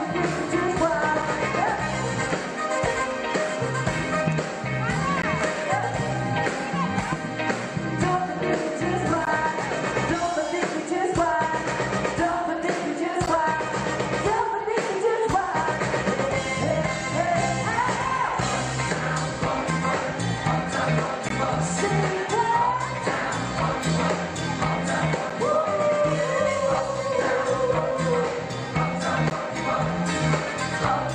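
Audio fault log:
1.22, 5.22, 9.25, 13.26, 17.27, 21.29, 25.3 and 29.3 s, gap between stream segments: the time stamps of consecutive segments leave small holes, which the player fills with silence. Each dropout lasts about 3 to 17 ms with hard edges, recurring every 4 s, which fits 4-second segments.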